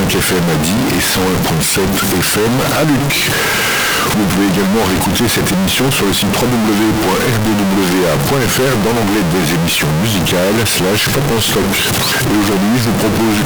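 From start to finish there's a harsh, buzzy grit on the sound, and even the quiet gaps are filled with noise. That's consistent with a stuck bit, likely a high one worth around -10 dBFS, pushing roughly half the samples off by that step.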